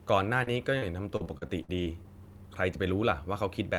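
From 0.43 to 2.05 s, repeated packet loss leaves a run of holes, about nine of them and none longer than roughly 58 ms. Each is patched by stretching the preceding sound, so the speech turns choppy and robotic, with pieces missing.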